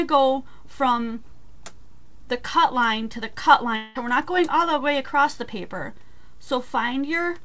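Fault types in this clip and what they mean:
Long network dropout: at 3.76 to 3.97 s, for about 0.2 s, the sound turns into a smeared buzz that carries on the last moment before the gap and fades out. There is no stretch of true silence. The audio then resumes further along, with that portion gone. This is likely packets failing to arrive, and the receiver's concealment fills almost the whole gap. The call codec's cut above 8 kHz is present on both sides of the break.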